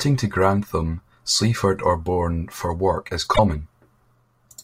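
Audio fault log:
3.33–3.39 s, damaged data in a compressed stream: part of the compressed speech stream arrives corrupted, so the decoder misreads those frames, loses sync and hunts for the next valid frame header. The result is a brief 64 ms glitch breaking into the speech.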